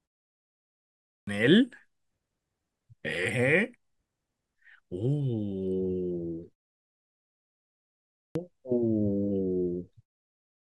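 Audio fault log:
1.11–1.27 s and 8.21–8.35 s, clipped start after a pause: speech resumes abruptly, missing its first sounds. About 160 ms and 140 ms are lost. The output device sleeps during the preceding 1.1 s and 1.7 s of silence, then wakes too late.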